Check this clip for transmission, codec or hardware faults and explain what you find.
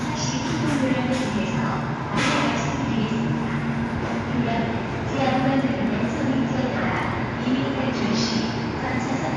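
One codec fault runs through the whole clip. The audio sounds dull and closed-in from start to finish, with nothing above 11.4 kHz, and a rough, fluttering grain clings to any steady tonal parts. This is likely Dolby Digital compression at a low rate, with the damage plainly audible, which fits a bitrate of around 64 kbps. Starved of bits, the encoder cuts the upper band away. Many of the remaining frequency lines get no precise values, so the decoder fills them with noise, and that filler produces the flutter around tones.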